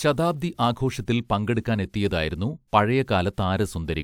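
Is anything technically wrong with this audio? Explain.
No, nothing is technically wrong with this audio.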